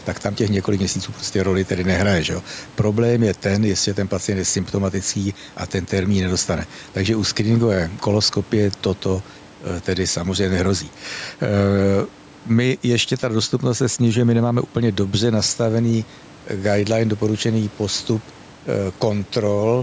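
Gain pumping runs through the whole clip. The level keeps moving by about 5 dB. The faint room noise sits about 30 dB below the speech. Loud and soft passages sit close together, so the speech sounds squashed. The likely cause is input gain set too high, with a fast limiter pulling it down on every peak.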